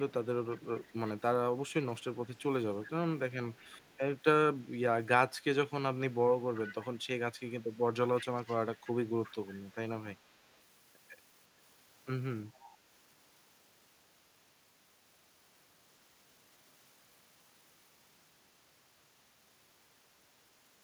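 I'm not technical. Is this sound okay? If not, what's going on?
No. There is echo leak: a faint, delayed copy of the speech trailing about a third of a second (357 ms) behind, at 0–1.11, 1.68–2.03, 2.86–2.90, 3.54–3.99, 6.12–7.64, 8.17–9.75, 10.29–10.58 and 12.53–12.77 s, clearest around 6.1–7.6 s. Likely one caller's loudspeaker is reaching their microphone, and their echo cancelling isn't fully removing it.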